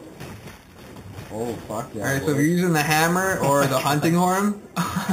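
Throughout the clip, the audio was raised to a higher rate by holding each sample rather than interpolating through a smoothing filter, leaving imaging from sample-and-hold upsampling. The original content fits an 8 kHz rate, so a mirrored copy of the spectrum folds up into the 4 to 8 kHz band, about 14 dB below the wanted signal. It adds a bright, metallic fizz that rises and falls with the sound, its lowest copy moving against the pitch.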